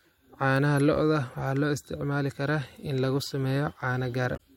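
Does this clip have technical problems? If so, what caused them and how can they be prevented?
Yes. Damaged data in the compressed stream makes the decoder lose sync, producing a brief glitch from 4.33 to 4.39 s. Checksums with error-checked transport or retransmission keep corrupted bytes from reaching the decoder.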